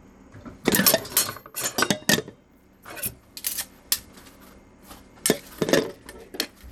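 Throughout the sound, the top end cuts off near 17.7 kHz and what remains of the treble flickers under a gritty, aliased haze, which points to Bluetooth SBC compression, likely at a low setting that fits about 96 kbps. Unlike a clean low-pass filter, the damage is coarse quantisation across a few wide bands.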